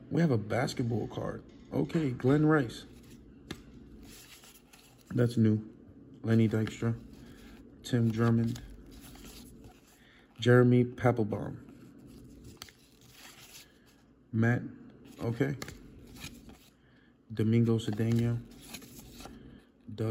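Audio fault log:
No faults found in the audio.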